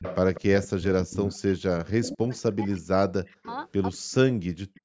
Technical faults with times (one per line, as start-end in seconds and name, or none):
0.00-1.58 echo leak
0.91-3.44 speech suppressed in double talk
2.07-2.41 echo leak
3.28-3.98 echo leak
3.98-4.84 speech suppressed in double talk